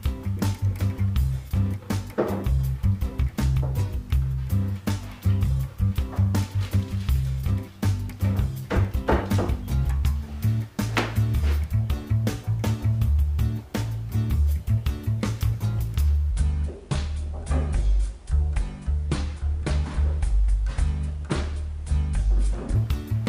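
From 16.31 s to 22.75 s a section at the wrong speed plays back at 0.672 times its proper rate, so the sound drops to about seven semitones lower and drags noticeably. The switch is abrupt at both edges. Because pitch and tempo fall together, this is a clock mismatch, likely an editor or player fitting that stretch to the wrong rate, rather than a pitch-shift effect, which would lower the pitch while keeping the timing intact.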